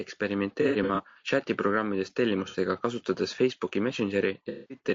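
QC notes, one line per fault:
throughout, low-delay AAC compression: The speech is rough and grainy from start to finish, with a hiss-like fill between the pitch harmonics and a thin, synthetic-sounding top band. The codec damage is plainly audible. The likely cause is AAC-ELD at about 32 kbps: its short frames resolve pitch poorly, and bits run out at that rate. Unlike the loss patches, this texture never comes and goes.
0.62–1.18 s, 2.48–2.57 s, 4.49–4.79 s, AAC frame loss with concealment: At these times the decoder loses frames and rebuilds the sound from the last good spectrum, producing smeared, noisy, phasey patches. In the first span about 240 ms is missing, scattered over 540 ms, with gaps under about a tenth of a second. The second span loses 60 ms, and the third loses 210 ms. Unlike the steady codec grain, these are brief, sudden blurs.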